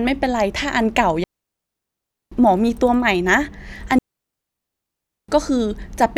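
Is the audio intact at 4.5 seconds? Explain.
No. A digital wireless dropout runs from about 3.99 to 5.29 s, so 4.5 s falls in the middle of a 1.3-second hole. The digital radio link lost too much data for the receiver to rebuild the stream, so it muted its output behind a very quick fade rather than pass corrupted audio. The speech drops into near silence with a clean edge, with no burst of noise or crackle before or after the gap.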